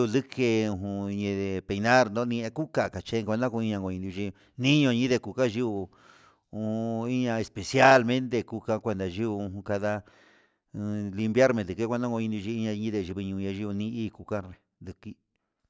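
Nothing stood out on listening to this speech recording.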